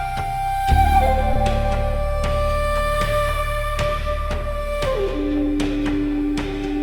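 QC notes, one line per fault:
1.33–1.37 s, short concealed packet loss: about 20 ms of the stream didn't arrive at the decoder in time, so the receiver papered over the hole with 20 ms of made-up signal, extending whatever it had just played and then crossfading back into the real audio. That stretch is a guess rather than the actual sound, so what you hear is a quick smear or wobble right at that spot instead of a clean transition.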